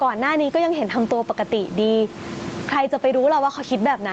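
Gain pumping runs through the whole speech clip, most likely from input gain set far too high and a fast compressor or limiter clamping down on every loud syllable. The level swings by roughly 20 dB, and the background sits about 30 dB below the voice. The result is squashed dynamics, heard against audio that stops at 8 kHz.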